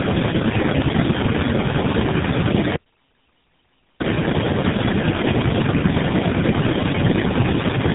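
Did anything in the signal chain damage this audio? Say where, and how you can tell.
Yes, at the codec stage, for the whole clip: this is tandem speech coding. The speech sounds rough, muffled and warbly, with nothing above 3.8 kHz, which fits roughly three low-rate speech coders in a row, each re-coding the previous one's already degraded output.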